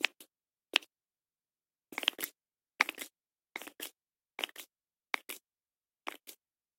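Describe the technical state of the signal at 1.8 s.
At 1.8 s the audio is intact, with no dropout, distortion or other technical fault in the signal.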